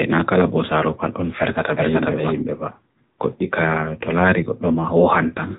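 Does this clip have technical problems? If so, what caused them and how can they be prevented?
Yes. Throughout, the speech was carried by an AMR narrowband mobile codec at a low rate. Its clearly buzzy, synthetic texture fits a mode near 8 kbps, where each 5 ms subframe gets only a few excitation pulses, and nothing above 3.8 kHz survives, so it sounds muffled and telephone-like. To prevent it, capture or transmit the audio over a wideband path, or at least a higher-rate AMR mode, instead of a narrowband mobile link.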